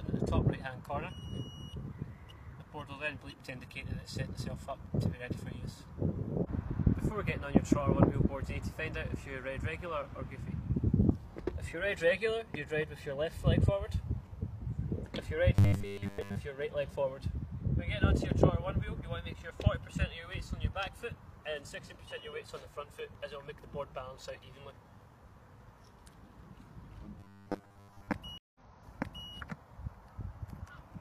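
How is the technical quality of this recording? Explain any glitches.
The recording has three glitches, all in the second half: two bursts of robotic sound and a stream reconnect near the end.

From 15.55 to 16.35 s and again from 27.20 to 28.13 s, the sound turns into a rigid, metallic buzz at 100 Hz. This is likely robotic sound from repeated short buffers: audio arrives too late, so roughly two-thirds of each span is filled by looping a 10 ms fragment while the real audio is skipped.

Between 28.38 and 29.29 s there is a stream reconnect. The audio drops out for 167 ms, then resumes 0.74 s earlier than where it stopped, so a short stretch is heard twice. The link broke, the player restarted its decoder mid-stream, and the server resent recent audio.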